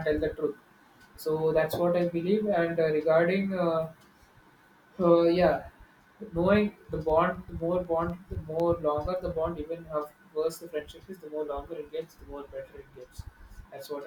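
From 6.85 to 8.60 s the speech carries periodic USB or driver dropouts. Something blocks the audio path every 0.25 s. Each time, a tiny fraction of a millisecond drops to silence. About seven evenly spaced ticks result, heard over the speech.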